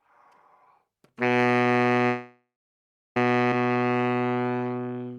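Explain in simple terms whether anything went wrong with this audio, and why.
At 2.06 s the sound stops moving forward. A buzzy continuation of the last sound fades, then about 0.7 s of silence follows. The sound resumes at 3.17 s exactly where it left off. This is a call audio freeze. The likely cause is delayed packets that emptied the receiver's buffer. It inserted a gap of about 1.1 s, and nothing was lost.

From 3.67 s to 5.18 s the sound plays slower, at about 87% speed, with the pitch unchanged. This is a jitter buffer slow-down. The receiver repeated tiny slices of sound to rebuild its reserve, adding about 0.21 s and stretching the sounds.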